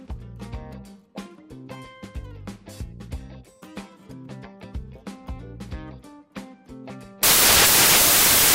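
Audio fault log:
7.23–8.55 s, samples built from the wrong bytes: for the last 1.3 s the audio gives way to loud, harsh broadband noise that runs to the end of the clip. The bytes of each sample are being combined wrongly, so the rapidly changing low-order bits land in the most significant position and swamp the true waveform.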